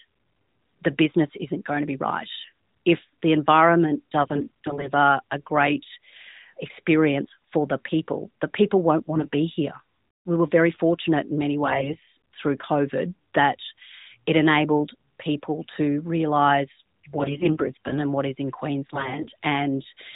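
AMR bit errors occur at 4.22 to 4.91 s, 9.14 to 9.35 s, 11.66 to 12.08 s, 17.16 to 17.97 s and 18.93 to 19.31 s. Flipped low-priority bits misplace the excitation pulses and the fine gain values. The speech keeps its pitch but turns hoarse and gargly.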